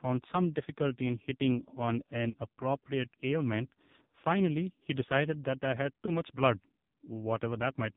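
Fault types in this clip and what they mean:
AMR narrowband mobile codec: Throughout, the speech passes through the 2G/3G mobile speech codec at 8 kHz sampling, so nothing above 4 kHz survives. The heavy buzzy, synthetic damage suggests a low rate near 5.9 kbps, where few excitation pulses model each voice segment.
Lost AMR speech frames: At 2.30 to 2.37 s and again at 6.06 to 6.21 s, corrupted frames were replaced by reused pitch and vocal tract settings at falling gain. The first gap, about 40 ms, suggests two lost frames; the second, one frame.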